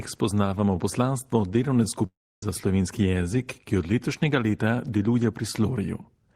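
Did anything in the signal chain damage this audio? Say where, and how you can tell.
Yes. From 2.06 to 2.43 s the speech cuts out: the last sound smears into a fading buzz that sinks into near-silence before the speech resumes further on. About 0.36 s is simply gone, which points to a likely long network dropout that the receiver papered over.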